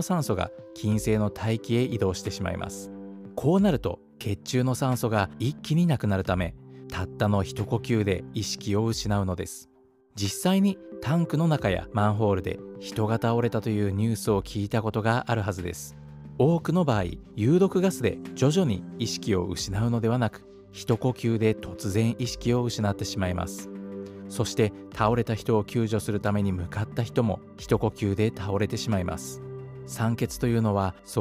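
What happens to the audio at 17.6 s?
Nothing goes wrong at 17.6 s; the audio plays through that moment intact, with no audible fault.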